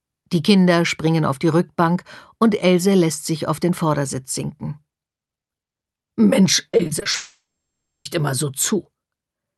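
From 6.71 to 7.15 s, repeated packet loss leaves several gaps of up to 20 ms, about a third of the span, patched by concealment, so the sound turns choppy and robotic. From 7.15 to 8.07 s, a long network dropout likely cuts the stream. A brief fading buzz gives way to roughly 0.6 s of silence before the sound returns with a piece missing.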